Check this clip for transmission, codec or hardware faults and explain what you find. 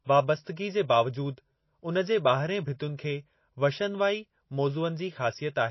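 The speech has two codec problems: plainly audible lossy-coding damage throughout, and two short pre-echoes ahead of sharp onsets.

MP3 compression, likely the cause, runs through the whole clip. Nothing is present above 5.8 kHz, and weak spectral detail flickers, giving a watery, swirly texture with smeared attacks. That fits a low bitrate around 24 kbps. A plain low-pass filter would dull the sound without the swirling.

Pre-echo occurs at 0.56 s and 2.97 s, where quantisation noise spread across a coding block leaks into the quiet before an attack. It sounds like a short hiss lasting about 10 ms and 16 ms respectively. Unlike a click, it leads into the onset and softens it.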